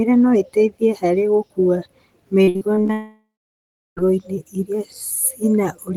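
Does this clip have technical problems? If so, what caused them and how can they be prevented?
Yes. From 2.43 to 2.91 s, repeated packet loss leaves six gaps, the longest 56 ms. Concealment stretches the previous sound, giving a choppy, robotic texture. A larger jitter buffer helps prevent this.

From 2.93 to 3.99 s, the audio fades into a buzz, then about 0.69 s of silence. This is likely a long network dropout. A more stable connection prevents it.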